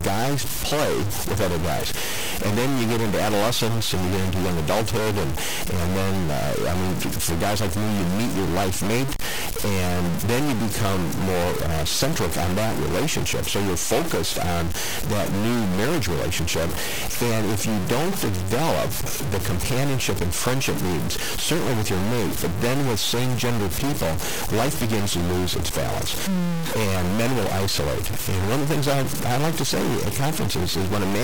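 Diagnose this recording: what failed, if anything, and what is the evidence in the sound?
A stuck bit runs through the whole speech recording, from the first second to the last. The sound has a harsh, buzzy distortion riding on every phrase, and the pauses are filled with a gritty noise floor instead of silence. The likely stage is the converter or its digital data lines, where one bit is pinned. Roughly half the samples are pushed off by a fixed step of about -20 dBFS. That high weight explains why the noise in the gaps is so prominent.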